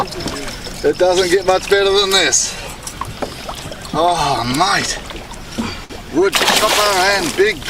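A packet arrived late at about 5.84 s, so the jitter buffer ran dry and the receiver had nothing new to play. This is a short stall from a late packet. To bridge the gap it held the last sound for roughly 56 ms, then resumed from exactly where it stopped once the packet turned up, around 5.93 s. Nothing is lost, but that moment is stretched, with a faint buzz or dip, and everything afterwards plays about 56 ms later than before.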